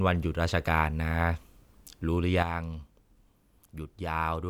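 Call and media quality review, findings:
Sudden gain jump at 2.43 s. Speech level drops by about 7 dB in one step and stays low to the end. Background noise falls with it. No fade, no recovery. Likely cause: a digital gain setting applied without a ramp, possibly a gain stage or bit shift in the capture or processing chain. Check AGC and volume-control handling.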